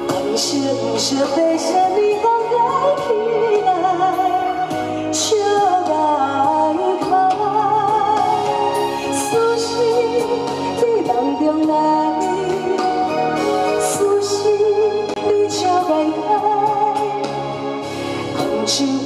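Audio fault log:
15.14–15.16 s, CD skip: a knock or a flaw in the disc threw the laser onto a different turn of the spiral track. The player muted for about 20 ms and resumed elsewhere, so the sound breaks briefly, then jumps abruptly forward or back.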